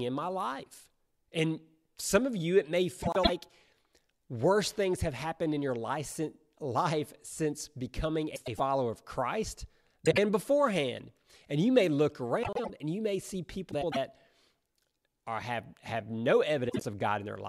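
Frames out of order at 3.03, 8.35 (after "since becoming"), 10.05, 12.43 (after "you may look"), 13.71 (after "and you may see") and 16.69 s. Adjacent blocks of 104.5 ms (52.2 ms at 10.05 and 16.69 s) play swapped, giving a garbled flutter. No time is lost.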